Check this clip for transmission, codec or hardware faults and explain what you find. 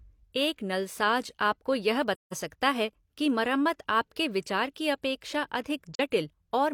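Two soft dropouts break up the speech, both from AAC frame loss with muting. Just after "नलसाज आपको यह", from 2.15 to 2.34 s, the sound fades into silence for about 170 ms and fades back in. After "आपके विचार की अपेक्षा", from 5.95 to 6.01 s, there is a shorter gap of about 43 ms. The decoder zeroed the spectrum of the missing frames, which fits four lost frames in the first gap and one in the second. The overlapping transform windows then tapered each gap's edges.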